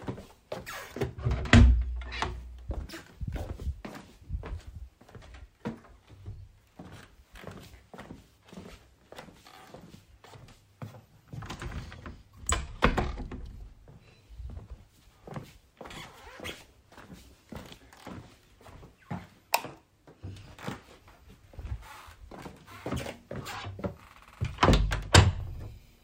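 At 9.46 s, 15.44 s and 21.44 s there is an overlap between stream segments. The time stamps of adjacent segments overlap, so the player discards a slice of audio that was never actually duplicated. About 8 ms, 5 ms and 8 ms go missing. The waveform jumps across each gap. Each one sounds like a small click or a tiny skip. The events fall about 6 s apart, matching a 6-second segment length.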